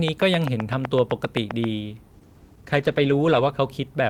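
From 0.08 to 1.65 s there's a train of clicks, about fifteen evenly spaced pops at 7.7 per second, sitting well above the speech. It's a steady ticking that carries through pauses, likely interference from nearby gear or a struggling interface.

Then at 2.14 s comes a call bitrate drop. The bandwidth estimate fell and the encoder went from 40 kbps down to 13 kbps, staying at the bottom for about 1.4 s. The speech turns coarse and rough until it recovers around 3.57 s.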